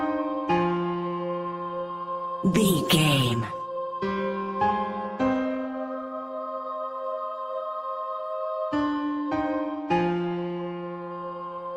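No technical faults can be heard anywhere in the audio. There is nothing to place on the timeline and nothing that calls for correction.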